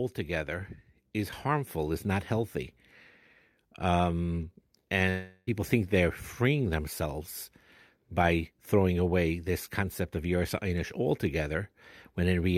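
This speech clip breaks up from about 5.09 to 5.49 s: the last sound is stretched into a fading buzzy continuation for roughly 0.38 s, followed by a brief silence of about 20 ms, and then speech resumes at "think they're freeing themselves" with about 0.38 s of audio simply gone. That pattern points to a likely long network dropout. Unlike a brief packet glitch, the concealment runs out into silence, and the missing stretch is never recovered.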